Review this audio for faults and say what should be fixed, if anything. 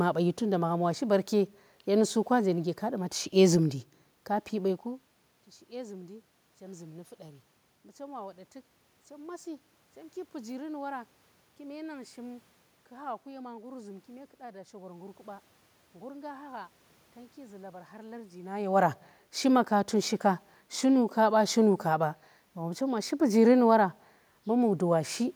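Nothing needs fixing, as no technical faults can be heard in the recording. The background noise belongs to the room, and the level shifts near 4.5 and 18.5 seconds come from the talker moving relative to the microphone.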